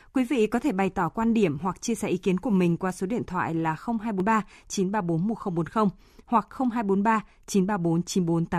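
At 4.2 s, right after "số điện thoại là", damaged data in the compressed stream makes the decoder lose frame sync, leaving a brief blip.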